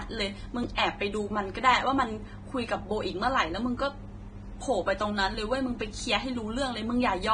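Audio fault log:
throughout, Vorbis-style compression: The whole clip has a grainy, hissy texture. Nothing comes through above 9.7 kHz, and the treble that's left sounds roughened, with fine detail turned into noise. The damage is heavy, which fits a low bitrate somewhere around 22 kbps, and it's most likely Vorbis encoding: the codec keeps a smooth spectral outline but quantises the detail on top so coarsely that it ends up as noise of similar energy.
0.75–0.78 s, pre-echo: Just ahead of a sharp onset there's a short smear of hiss, about 27 ms long, so the attack arrives softened rather than crisp. The transform codec spreads its quantisation noise across the whole block, and because the loud onset falls late in that block, noise sized for it leaks into the quiet stretch just before. That leaked noise is the hiss you hear leading in.
5.35 s, dropped buffer (overrun): The sound jumps forward at this point with no gap. 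A tiny piece, roughly a millisecond or two, is missing, and the audio on either side is butted straight together. The likely cause is that the recording side didn't read its buffer in time, so the hardware wrote over those samples. The jump comes from the join, where two stretches that were never adjacent now sit edge to edge.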